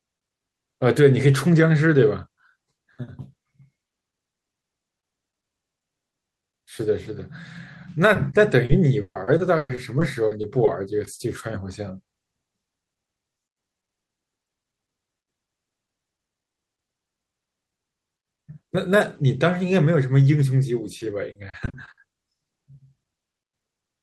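Speech, with repeated packet loss (robotic sound) from 8.13 to 10.69 s and again from 20.99 to 22.13 s. Short dropouts, the longest 140 ms, are bridged by extending the preceding sound, leaving a choppy texture with pieces missing. About a fifth to a quarter of each stretch is concealed.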